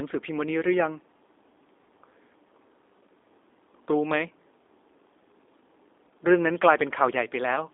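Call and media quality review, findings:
G.729 codec damage, whole clip: plainly rough, synthetic speech. The spectrogram shows a 300 Hz to 3.7 kHz band with an empty ceiling above 3.8 kHz. This fits 8 kbit/s G.729A coding.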